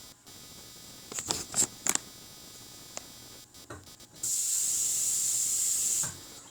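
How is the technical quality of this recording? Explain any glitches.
The technical quality is compromised by one fault that runs through the whole recording of sounds. Computer activity noise is present from start to finish. It is a buzzy, pulsing chirp, repeating roughly 300 times a second. It sits roughly 20 dB below the sounds. The processor, graphics card or mouse draws changing current, and that shifts the ground the audio circuit shares. The noise follows the computer's workload, not the recorded sounds.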